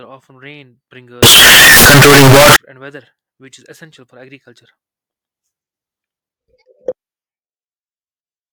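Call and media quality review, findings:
Signed and unsigned mixed up, 1.23–2.56 s, after "often rain", before "and weather which is". Likely sample-format mismatch at decode or capture: 16-bit samples read with the wrong signedness, top bit flipped. Each zero crossing jumps full scale. Very loud, harsh distortion, with quiet stretches pushed to the same level as the rest.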